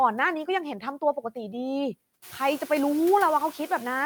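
Throughout the speech, a noise suppressor pulls steady-noise bands down by about 13 dB frame by frame, so the background dips between words and swells back under them. The room noise rises by about 18 dB around two seconds in.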